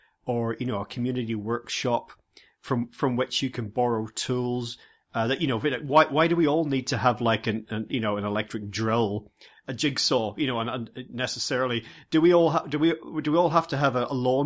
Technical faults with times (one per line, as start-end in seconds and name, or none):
none